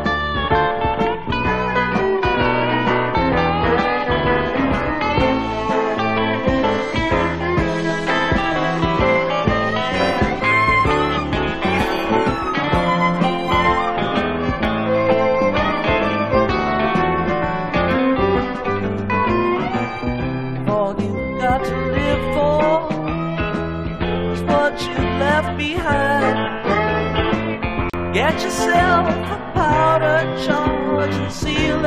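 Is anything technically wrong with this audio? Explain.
Yes. From 27.90 to 27.94 s there is a gap at a join of encoded pieces: separately encoded segments joined untrimmed leave a gap of about 38 ms with smeared edges.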